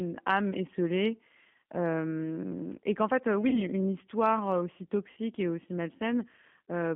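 Throughout, the speech sounds slightly rough and synthetic, held inside a narrow telephone band of about 150 Hz to 3.4 kHz. That is the G.729 codec at 8 kbit/s, rebuilding each 10 ms frame from a vocal tract filter, a pitch predictor and a few pulses, with plainly audible damage.

From 3.49 to 3.62 s, just after "esselée et qu'en fait" and before "une histoire aussi", the sound turns into a fading buzzy tone or coloured noise. Again from 5.11 to 5.18 s, after "une histoire aussi" and before "et aussi", the same thing happens. This is VoIP packet loss concealed by the speech codec. The decoder stretches its last pitch and filter across roughly 40 ms and then 60 ms of missing audio, which fits two and then three lost packets. It lowers the gain as it goes, so the voice stays weak briefly afterwards.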